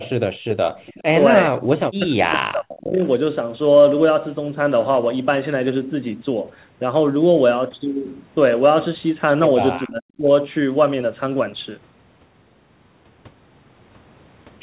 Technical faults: echo leak; speech suppressed in double talk

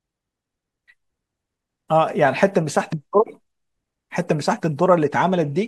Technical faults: compressed frames skipped

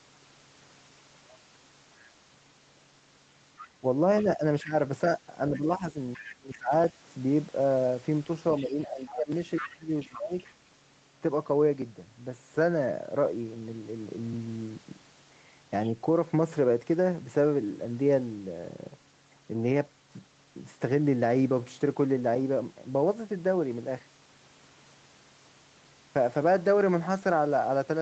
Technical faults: other side's voice leaking through; speech suppressed in double talk

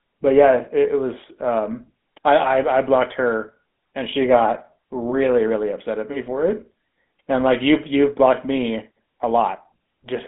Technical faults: GSM full-rate codec

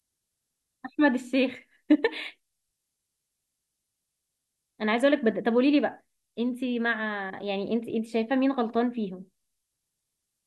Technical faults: switching supply whistle

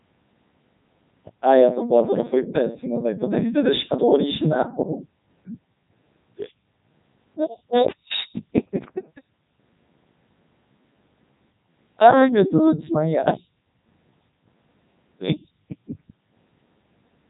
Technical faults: Codec 2 vocoder

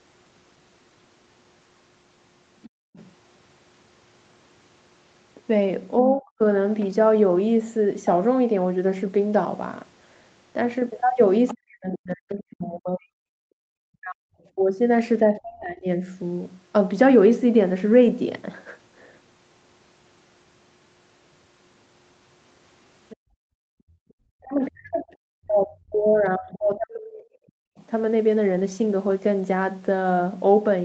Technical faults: other side's voice leaking through; background gated by the echo canceller; speech suppressed in double talk

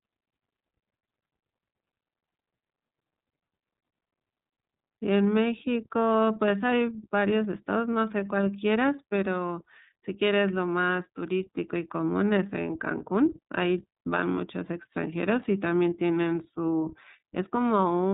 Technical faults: iLBC codec

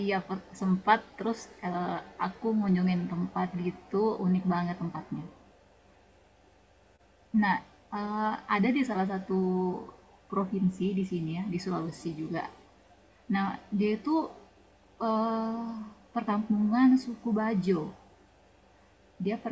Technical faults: none

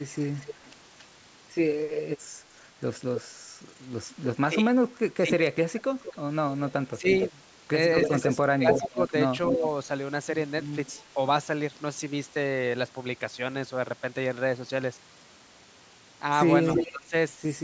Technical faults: echo leak; speech suppressed in double talk

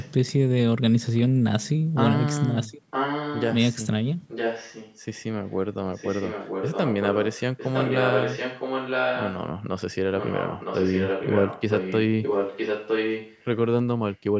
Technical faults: echo leak

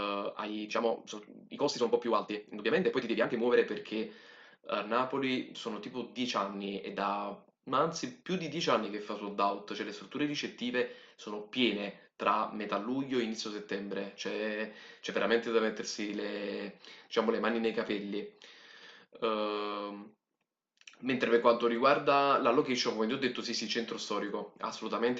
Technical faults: time-stretched section

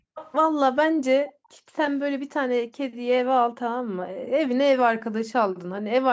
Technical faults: background gated by the echo canceller; echo leak

